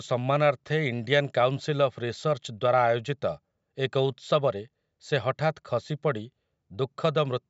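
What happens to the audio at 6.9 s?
Nothing goes wrong at 6.9 s: the speech carries on intact through that moment, with only the usual call microphone processing shaping it.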